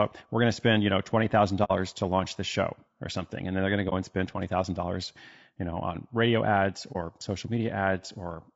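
Throughout the speech the sound is rough and grainy, with noise filling the gaps between harmonics and a thin, synthetic-sounding top band. This is likely low-delay AAC compression, AAC-ELD, whose short frames resolve pitch poorly and which here fits a bitrate around 32 kbps.

At 1.64 to 1.71 s, just before "to launch the show", the audio fades into a soft 60 ms hole. Short dropouts follow at 3.89 to 3.93 s, before "and spend", and at 6.92 to 6.96 s, after "know on radio ads", each lasting 30 ms. These are AAC frame loss with muting. The decoder zeroed the missing frames, two at the first spot and one at each of the others, and its overlapping windows smooth the edges of each gap.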